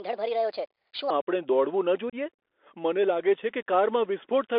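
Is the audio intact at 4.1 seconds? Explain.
No, at 4.1 s you're still hearing the Bluetooth CVSD headset codec that runs the whole clip: one-bit slope coding squeezes the speech into roughly 300 Hz to 3.5 kHz, leaving scratchy s sounds and granular hiss.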